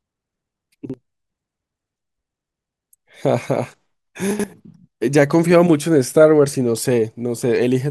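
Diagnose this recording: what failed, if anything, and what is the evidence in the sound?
Two brief jumbled moments break the flow of the speech, one at 0.85 to 0.94 s and a longer one at 4.31 to 4.44 s. These are chunks out of order at the driver or buffer stage. A block of about 43 ms was delivered late and played after its successors, one block late at the first event and two late at the second. No audio is missing, but each reordering leaves three hard joins.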